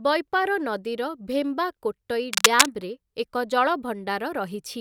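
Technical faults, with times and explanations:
2.33–2.72 s, cable scratch noise: immediately after "ନଦୀର ଭେମ୍ବାକୋଟ୍ଟଇ", a burst of dense, irregular crackle and rustle sits over the speech for about 0.4 s, peaking somewhat louder than the speech. The cause is likely a worn cable, connector or control being moved, so the contact resistance fluctuates rapidly and injects uneven noise bursts. That is why it is heard as a brief scratching layer rather than a steady hiss.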